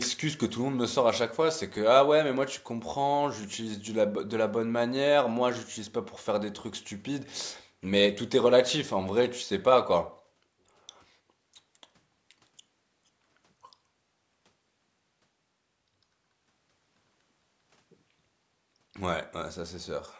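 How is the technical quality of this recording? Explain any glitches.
No glitches turn up anywhere in this speech recording. It has come through a call's microphone processing, which leaves nothing above about 8 kHz and trims away the very lowest bass.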